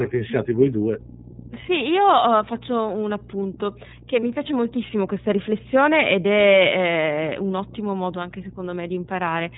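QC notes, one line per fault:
throughout: mains hum. A steady low tone at 60 Hz sits under the whole clip, with some energy at its low harmonics. It sits about 15 dB below the speech. A ground loop or a nearby transformer is coupling the power line into the signal path, so the tone stays fixed in pitch and level regardless of what the speech does.
throughout: iLBC codec. Nothing above 4 kHz comes through, so the speech has a narrowband telephone quality, and the coding damage is plainly audible as a rough, slightly synthetic edge on voiced sounds. iLBC codes the excitation of each frame independently, trading naturalness for robustness. The character fits the 13.33 kbps mode with 30 ms frames.
4.20–4.23 s: lost iLBC frames. For about 30 ms the speech turns into a brief held, slightly buzzy vowel-like sound. This points to a single lost frame. The decoder filled the gap by repeating the last pitch cycle blended with noise. 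Because each iLBC frame decodes independently, normal speech resumes almost immediately after the gap, with no lingering smearing into the following frames.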